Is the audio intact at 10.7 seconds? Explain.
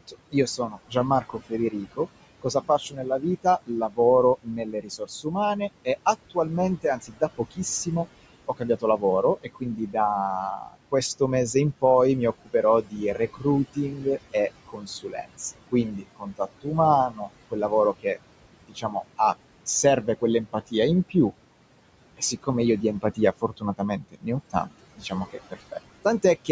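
No. Between 10.57 and 11.83 s the speech is cut by the noise suppressor. The suppressor misjudges parts of the speech as background noise and pulls them down along with it, by about 16 dB at the deepest point. Only around a fifth of a second within that span is affected in total. Those parts sound swallowed or faint, as if the softer sounds and word endings had dropped away.

The same moment also carries noise suppressor artifacts, which run through the whole clip. The suppressor treats frequency bands it judges to be steady noise, cutting them frame by frame by about 21 dB. At 10.7 s this means the background is held low during pauses and lets through under the speech.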